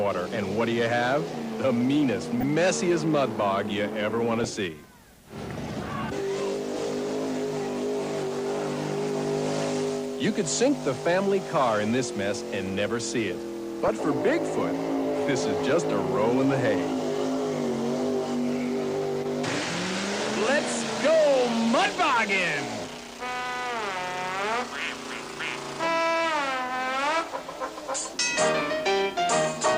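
There's DAB burbling at 2.41 to 2.43 s, 4.34 to 4.56 s and 13.86 to 13.88 s, where bit errors, around 0.1 to 0.2 percent, slip past the error correction into the MP2 data. The damaged sub-band samples come out as brief blips, and damaged scale factors make sub-bands jump in level for up to a frame.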